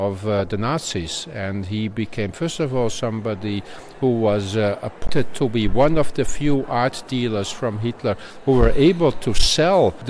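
There are no technical faults to describe at any point in the clip.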